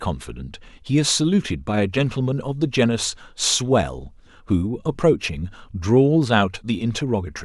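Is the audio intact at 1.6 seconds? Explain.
Yes, the speech at 1.6 seconds plays through intact, with no dropout, click, distortion or other fault at that moment.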